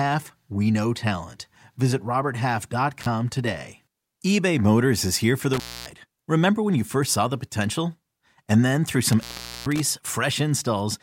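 At 3.01 s, 5.53 s and 9.09 s the speech drops out from an intermittent contact, a loose plug or cable briefly opening. The gaps run about 34, 267 and 433 ms, each crackling at the edges with faint hiss underneath.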